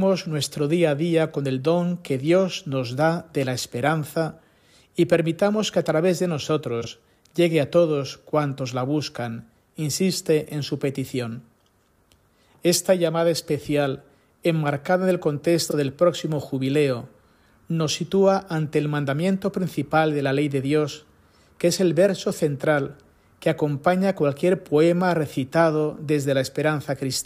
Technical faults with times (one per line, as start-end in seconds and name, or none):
6.81-6.87 frames out of order
15.68-15.74 frames out of order